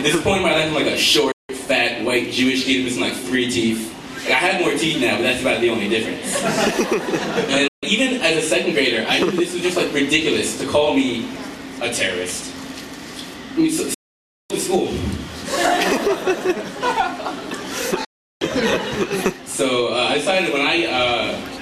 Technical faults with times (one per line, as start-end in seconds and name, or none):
1.31-1.50 digital broadcast dropout
7.67-7.83 digital broadcast dropout
13.94-14.51 digital broadcast dropout
18.04-18.42 digital broadcast dropout